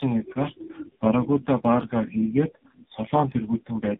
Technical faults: tandem speech coding

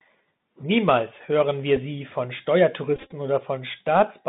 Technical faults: Bluetooth CVSD headset codec; Bluetooth headset packet repeated

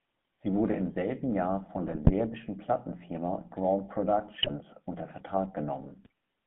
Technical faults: GSM full-rate codec; GSM bit errors

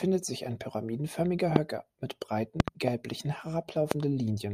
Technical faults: loud pop

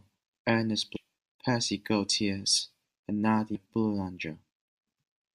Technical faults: compressed frames skipped

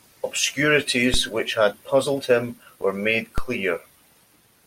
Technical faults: DC step

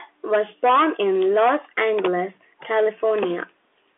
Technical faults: none

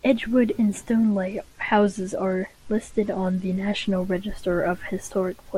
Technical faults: Bluetooth SBC bit pool drop

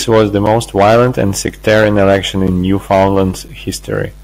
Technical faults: gap between chunks

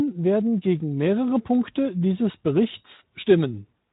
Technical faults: none

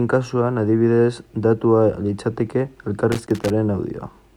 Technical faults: loose connector crackle

